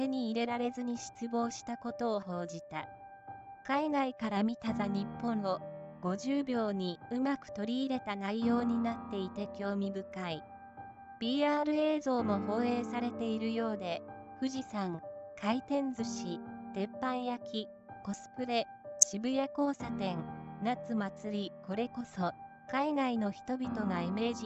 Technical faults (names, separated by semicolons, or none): none